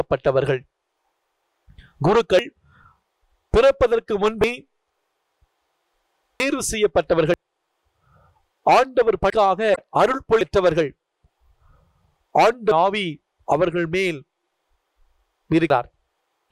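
At 2.39, 4.44, 6.40, 7.34, 9.30, 10.41, 12.72 and 15.70 s the sound jumps forward, with no silence in the gap. Each jump loses about a tenth of a second, a little more at 9.30 s and nearly a third of a second at 10.41 and 12.72 s. The likely cause is a dropped buffer (overrun): samples were overwritten before being read, so the edges were spliced together. A dropout would leave a gap instead of a skip.

From 9.74 to 9.81 s a short stretch of misplaced energy comes from a corrupt frame that was decoded anyway. Flipped bits across a few frames gave wrong spectral values, so the tones sit where nothing belongs. Unlike the overruns, nothing is skipped. The timeline runs on unbroken, and the fault sounds like added sound rather than a jump.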